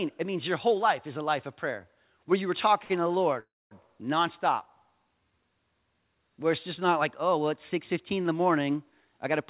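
Speech carried over a call path, band-limited to nothing above 4 kHz, which fits G.711 mu-law at 64 kbps. A short stall from a late packet at 2.84 to 2.92 s, after "prayer where you were", holds the last sound for 57 ms before "to the" resumes intact. A call audio freeze at 3.40 to 3.73 s, after "to the", stretches into a fading buzz or hiss and then 240 ms of silence, inserting 312 ms of delay, likely from packets held up in transit. A jitter buffer speed-up at 9.05 to 9.41 s, after "in the morning", trims about 40 ms of pitch periods, so the audio runs at 108% speed at unchanged pitch.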